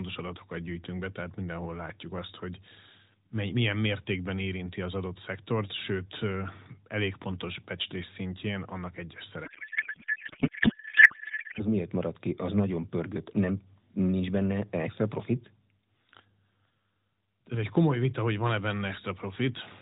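From 9.46 s to 11.65 s the speech gives way to garbled noise and a wobbling warble that barely tracks it. This is a codec payload misread: the AMR narrowband stream, whose light coding character elsewhere fits about 12.2 kbps, was packed octet-aligned but decoded as bandwidth-efficient. The decoder therefore took bits from the wrong positions in each frame until the two sides agreed on the packing again.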